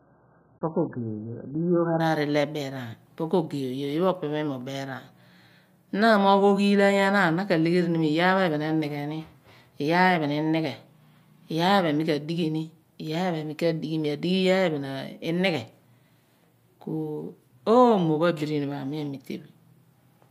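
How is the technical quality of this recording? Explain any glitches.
The opening is degraded: an adaptive stream starting at a low bitrate. From 0.0 to 2.0 s the speech is dull, with nothing above 1.8 kHz and stronger codec smearing, which fits a very low-bitrate stream. The quality then jumps abruptly without any dropout, unlike a steady filter or a connection stall.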